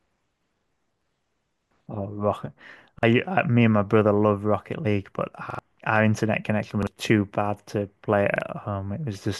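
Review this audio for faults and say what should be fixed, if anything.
Repeated buffers interrupt the speech five times, at 0.60–0.64 s, 2.99–3.03 s, 5.50–5.59 s, 6.83–6.87 s and 8.36–8.41 s. Each time the playback device ran out of fresh audio and replayed its last block of about 43 ms, which fits a 2048-sample buffer. The result is a brief stutter with hard joins. The one at 5.50 s plays the block twice more, skipping about a tenth of a second of speech, while the others lose about 40 ms each. On a waveform, identical segments sit side by side with abrupt steps at the seams. A spectrogram shows the same slice copied and thin vertical click lines at each join. To prevent this, enlarge the output buffer or raise the priority of the audio thread so that every block is delivered on time.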